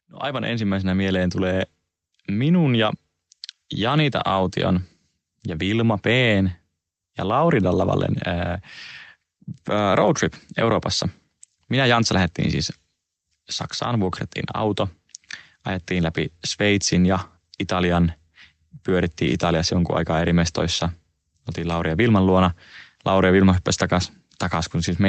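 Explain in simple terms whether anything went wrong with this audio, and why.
Yes, the volume creeps upward from about 0.22 to 16.16 seconds. This is automatic gain rising: the call's volume control judged the sound too quiet and slowly turned it up. Unlike someone simply speaking louder, the background noise grows right along with the voice.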